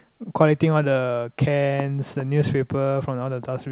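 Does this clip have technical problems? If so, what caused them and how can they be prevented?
No, the speech carries nothing above 4 kHz, which fits a narrowband call path such as G.711 A-law at 64 kbps working as designed, and there is nothing to fix or prevent.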